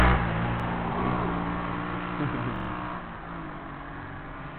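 Repeated buffer at 0.60 s and from 2.56 to 2.69 s: new audio arrived late, so a 43 ms chunk replays once, then another three times, as a hard-joined stutter that fits a 2048-sample buffer.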